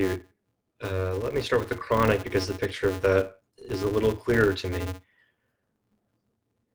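From the start and through all 6.7 seconds of speech, there is clock drift between sender and receiver: the sender's clock runs roughly 3 percent slow, so the receiver's jitter buffer keeps draining and has to be topped up. The result is small, unevenly spaced timing hiccups rather than one obvious break. On a waveform, these show as slight discontinuities where a short stretch is repeated. On a spectrogram, they show as brief vertical seams interrupting otherwise smooth formant tracks.

Also present throughout is a filter restarted on every block. The filter discards its memory at each block boundary and begins again from silence, so every block opens with a tiny transient. These arrive at about 188 Hz, which fits a 256-sample block, and together they form a buzz that rises and falls with the loudness of the speech. A spectrogram shows a steady harmonic comb at 188 Hz and its multiples, strongest in loud passages. 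A zoomed waveform shows a regular train of small clicks.

From 0.28 s to 6.66 s come the repeated timing corrections. Because the incoming audio arrives slower than it is played out, the receiver keeps repeating short pieces, always lengthening. Over the stretch, these add about 200 ms, so playback runs at an effective 97 percent speed. Each repeat is small, and together they give the rhythm a slightly dragging, unsteady feel. On a waveform, duplicated fragments appear as repeated wave shapes at irregular intervals. A spectrogram shows brief seams where a segment is repeated.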